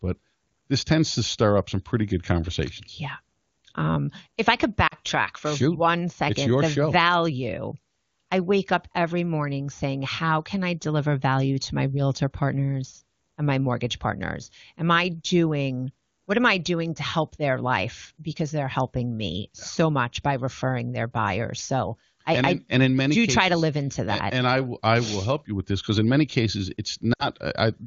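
At 4.87–4.95 s and again at 27.13–27.27 s, lost AMR speech frames make the voice drop to near silence within two frames. The decoder repeats its last good pitch and vocal tract settings at falling gain, so the 40 and 60 ms gaps show as smeared, fading harmonics over a shrinking waveform.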